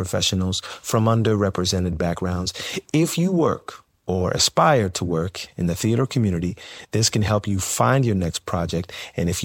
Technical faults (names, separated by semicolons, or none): compressed frames skipped